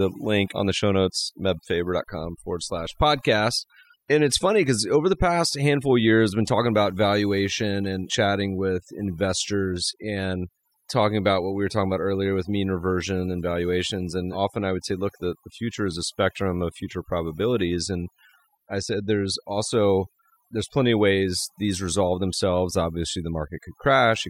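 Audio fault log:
Throughout: overdone noise removal. The noise reduction was pushed too hard on a noisy speech recording. Any frequency band sitting close to the tool's noise estimate gets pulled far down or shut off entirely. The quieter parts of the speech fall below that line and are lost along with the noise. The gaps between phrases sink to near silence, dotted with twinkling specks where isolated bands flicker on and off.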